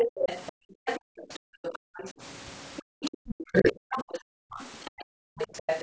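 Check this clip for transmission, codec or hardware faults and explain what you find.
Three echo-related faults show up in this speech recording, all tied to a call where the far end was playing on a loudspeaker.

Other side's voice leaking through runs from 0.0 to 2.1 s and again from 2.77 s to the end. A second, fainter voice sits about 15 dB under the talker. The likely cause is residual echo: the loudspeaker's output reached the microphone and the echo canceller failed to subtract all of it. What sets it apart from crosstalk or a second person in the room is that this voice comes through as a weak, separate layer beneath the talker rather than blending in as nearby speech.

Background gated by the echo canceller occurs from 0.52 to 1.96 s, from 2.82 to 3.24 s, and from 4.27 to 5.37 s. The room tone sinks by as much as about 40 dB, for roughly a second in the first span, a few tenths of a second in the second, and most of a second in the third. 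During those moments the canceller clamped the microphone because the loudspeaker was active. This is a drop in the ambience alone, not in the talker, and the room returns once the far end goes quiet. That separates it from a network dropout, which would silence everything.

Speech suppressed in double talk hits between 3.52 and 3.99 s, where the talker's own voice dips by around 25 dB for about a third of a second. The dip comes while the far-end voice is also present. The likely cause is the canceller mistaking overlapping speech for echo and attenuating both, which explains why the talker's voice dips along with the echo. A packet-loss gap would instead remove the sound abruptly, whether or not anyone else was speaking.

The call's microphone processing limits the band to nothing above 8 kHz, which is a property of that path and not one of the faults above.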